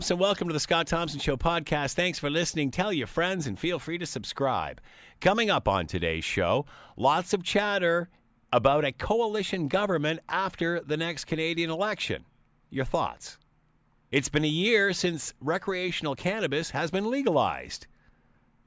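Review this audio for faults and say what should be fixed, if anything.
No faults; nothing to fix.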